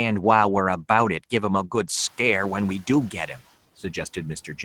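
Speech cut by the noise suppressor, 3.12 to 3.4 s: soft speech is taken for room noise and dipped about 8 dB, sounding faint and swallowed.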